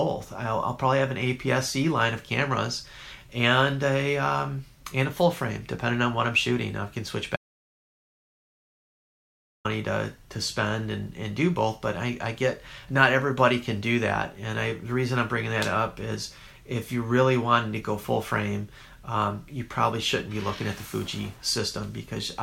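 The input was likely lost, with silence written instead, causing an audio dropout to silence from 7.36 s to 9.65 s: about 2.3 s of dead, roomless silence.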